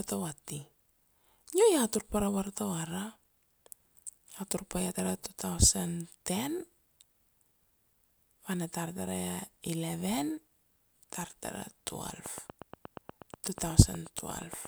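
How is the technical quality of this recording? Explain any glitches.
A train of clicks mars the end. From 12.26 s to 14.66 s, about twenty similar clicks tick at a steady 8.35 per second, peaking roughly 5 dB above the speech, likely interference or a faulty connection or power supply. The regular spacing and matching shape set it apart from random crackle.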